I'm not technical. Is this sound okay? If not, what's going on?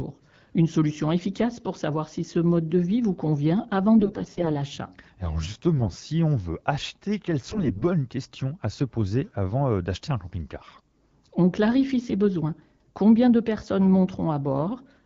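No, not entirely. In four short spots the speech turns hoarse, scratchy and a bit gargly: 3.98 to 4.49 s, 5.76 to 5.99 s (just before "on veut acheter quelles"), 7.49 to 7.84 s (right before "questions à se poser"), and 10.54 to 10.81 s (just after "avant euh d'acheter un"). These are AMR bit errors. A weak phone connection flipped some of the finer details in the coded speech, so the pitch and loudness mostly survive but the texture gets rough.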